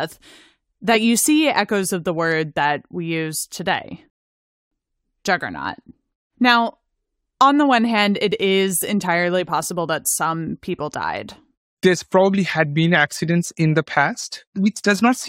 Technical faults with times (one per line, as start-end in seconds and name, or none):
4.10-4.72 rebuffering stall